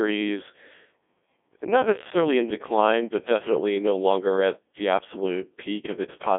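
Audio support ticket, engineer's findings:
Codec 2 vocoder, whole clip. Robotic, buzzy speech from heavy codec damage, consistent with a very low-rate mode around 1.2 kbit/s. Decoder rebuilds speech from sine waves using only pitch, voicing, energy and envelope, so the original waveform is lost. Line band about 250 Hz to 3.5 kHz. Spectrogram: smeared harmonic stripes, blank above 3.8 kHz. Waveform: regular synthetic-looking periods, none of the original fine detail.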